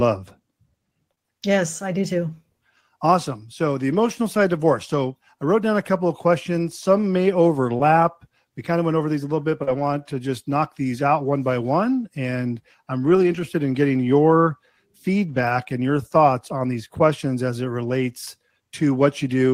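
Speech carried over a lossy network link shows short concealed packet loss at 1.11–1.19 s (two holes back to back), 7.77–7.81 s and 9.63–9.69 s just after "a little bit but". Audio missed the decoder in time, so the receiver extended the preceding sound and blended back, heard as brief smears or wobbles. A lost packet rebuilt from error correction follows at 7.79–7.81 s, 9.67–9.85 s before "to just knock these", 13.03–13.41 s before "in getting your", and 15.29–15.51 s. There the decoder played low-bitrate backup copies, leaving no gap but rougher, noisier stretches.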